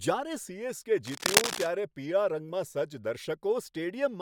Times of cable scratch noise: 1.05-1.68

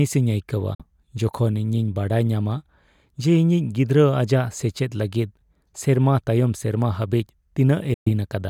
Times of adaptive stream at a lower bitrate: none

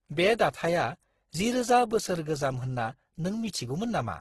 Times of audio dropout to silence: none

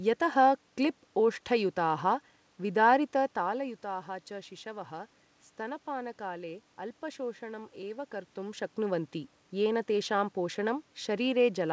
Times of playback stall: none

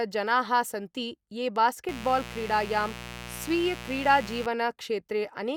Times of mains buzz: 1.89-4.46

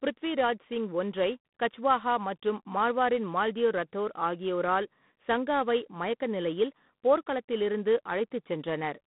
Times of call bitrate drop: none

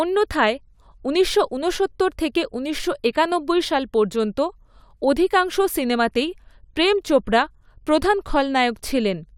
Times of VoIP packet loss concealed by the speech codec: none

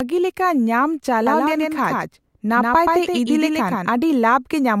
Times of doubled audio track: 1.27-3.89

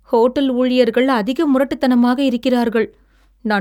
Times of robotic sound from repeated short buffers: none

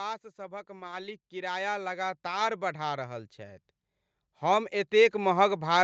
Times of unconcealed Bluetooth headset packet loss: none

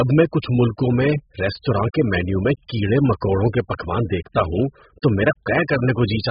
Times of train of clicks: none

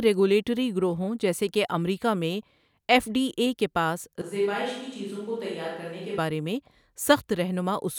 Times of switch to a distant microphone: 4.22-6.18

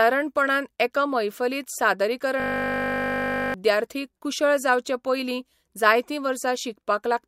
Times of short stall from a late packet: none

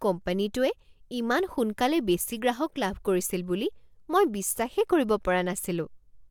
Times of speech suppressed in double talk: none

